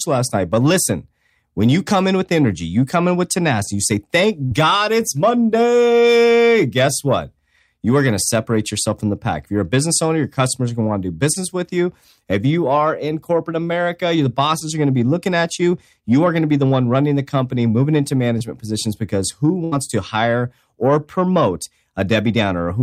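At 4.45 to 4.53 s there's a burst of packet loss: about 60 ms of the speech never arrived, so the receiver stretched the last sound for roughly 54 ms and faded it down, giving a brief held buzz or hiss before playback jumps ahead. Then at 11.33 to 11.37, 14.59 to 14.62 and 18.38 to 18.42 s come short concealed packet losses, each about 20 ms missing and patched by continuing the preceding sound, heard as a quick smear or wobble where a short sound may drop out. At 19.64 to 19.74 s a second burst of packet loss hits, with about 80 ms missing and roughly 72 ms of fading fill before the speech resumes further on.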